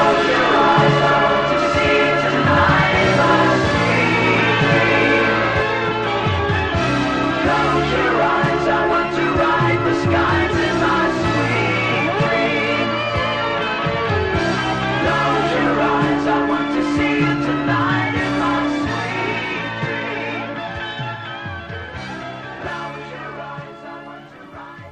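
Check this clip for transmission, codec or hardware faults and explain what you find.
One fault is present. A doubled audio track runs from the very start of the clip until 5.62 s, where the second copy drops out abruptly. The same sound is mixed in twice, most likely because a slower capture path records it a second time or an edit leaves two copies out of step. The trailing copy sits roughly a tenth of a second behind and about as loud as the original. It is full-band, with no decay or room colouring, so every onset is followed by a crisp, flat repeat.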